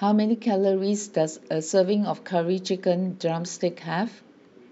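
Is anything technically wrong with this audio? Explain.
No, nothing technically wrong can be heard in this speech recording. There is no fault to point to at any moment in it.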